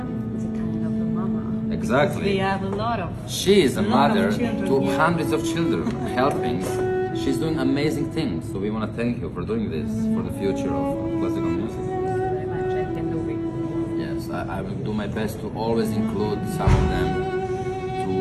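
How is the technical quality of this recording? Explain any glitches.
There are no glitches here: the signal holds steady and continuous throughout, with no dropouts, distortion or other technical faults to explain.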